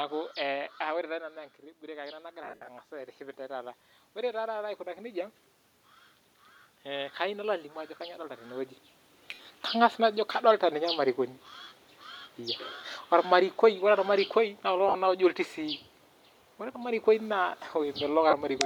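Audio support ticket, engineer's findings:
Automatic gain rising, 1.79–5.4 s. Input level dropped about 11 dB; the AGC responded by ramping gain up about 8 dB over several seconds, so the voice and room noise swell together. The level shift near 1.0 s is a talker moving, not a fault; the AGC lift is separate. Probable component: capture-side AGC, slow release toward a quiet input.

Lost LE Audio frames at 2.43–2.68 s (187.5 ms missing, scattered across 240 ms, longest gap roughly 70 ms), 9.31–9.45 s (90 ms across 135 ms, longest gap about 50 ms), 11.63 s (37.5 ms, right after "kadolita ninye ilmarikoni"), 14.88–14.95 s (52.5 ms across 60 ms), and 18.30–18.33 s (22.5 ms). The gap lengths fit 7.5 ms LC3 frames. On each loss the LC3 concealment repeats the last spectrum with randomized phase, so tones turn into a noisy smear. The longer runs fade toward silence. Probable component: Bluetooth LE Audio link.

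Automatic gain falling, 18.05–18.61 s. The AGC judged the input too loud or its background too strong and pulled gain down about 4 dB over roughly half a second. Voice and background sink together, with the 18.30 s frame loss inside the same stretch. Probable component: capture-side AGC attack. The level change near 8.5 s is a talker moving, not AGC.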